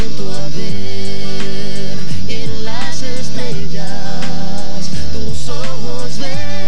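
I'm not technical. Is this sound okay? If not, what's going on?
Yes, this one sounds fine, with nothing going wrong anywhere in it that you'd need to worry about.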